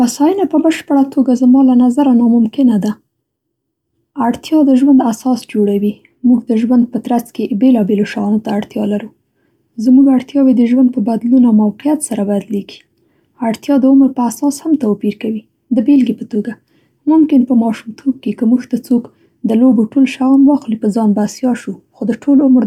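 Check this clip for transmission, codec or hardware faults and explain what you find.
No transmission, codec or hardware faults turn up anywhere in the recording. The speech runs continuously, with nothing that points to trouble in the chain that carried it.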